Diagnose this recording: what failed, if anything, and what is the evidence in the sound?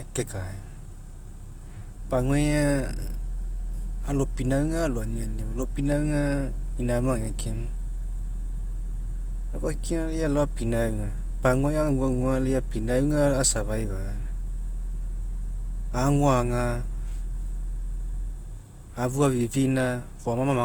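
Grainy, rough speech throughout, bandwidth still reaching about 20.1 kHz: a codec fault, likely Opus compression in CELT mode noise-filling starved bands, consistent with 24 kbps.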